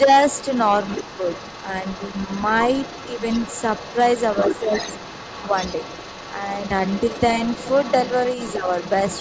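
At 0.05 to 0.09 s the speech briefly dips by about 5 dB, the first sign of speech suppressed in double talk. The same dips recur at 0.94 to 1.21 s and 4.6 to 4.72 s, and most deeply, about 10 dB, at 8.56 to 8.66 s. The likely cause is an echo canceller turning down the talker while the far end also spoke. These are short drops in the main voice's level, not added sound.

From 0.28 s to the end, the other side's voice leaking through sits underneath at about 15 dB below the speech. It is a separate, quieter voice, most likely loudspeaker echo the canceller left in, rather than a loss in the talker's own level.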